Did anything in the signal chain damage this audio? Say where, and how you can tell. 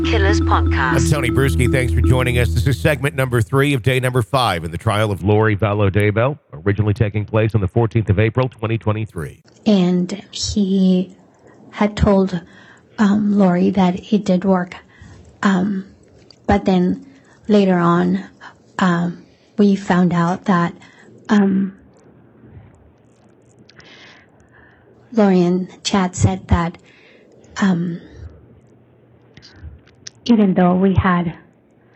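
Yes, at the codec stage of the Bluetooth link. A Bluetooth SBC bit pool drop occurs three times: 5.21 to 9.09 s, 21.38 to 24.94 s, and 28.26 s to the end. In each stretch the treble dulls and a gritty quantisation noise rises; after the first two it clears when the rate recovers. This fits the bit pool falling from 28 to 6, near 60 kbps, so the upper sub-bands are starved and the remaining bands are coarsely quantised.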